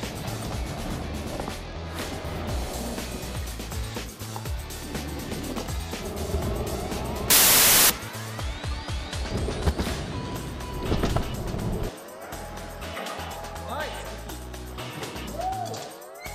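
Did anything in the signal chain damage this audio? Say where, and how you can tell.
Yes. At the sample-format conversion stage, from 7.30 to 7.90 s, samples built from the wrong bytes turn the sound into loud, harsh broadband noise. The reader misassembled each sample's bytes, so the jittery low bits became the dominant values. The waveform fills with dense, large-amplitude noise, and the spectrogram shows a flat, bright band across all frequencies.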